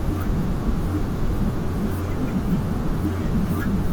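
At 1.31 s the quality steps down abruptly and stays there to the end, with no gap or dropout at the switch. That's an adaptive stream falling back to a lower bitrate, as a slowing connection pushes the player onto a leaner version of the speech. It sounds like a move from about 64 kbit/s Opus to about 24 kbit/s. The top end is still there, reaching about 20.3 kHz, and codec artefacts come forward.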